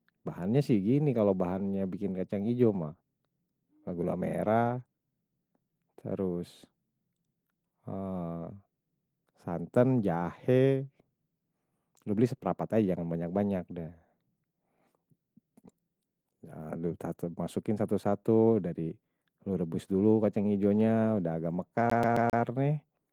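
CD stuck on one turn, from 21.90 to 22.43 s: a scratch keeps throwing the laser back, so a 133 ms slice of speech repeats four times with brief mutes, a rapid even stutter.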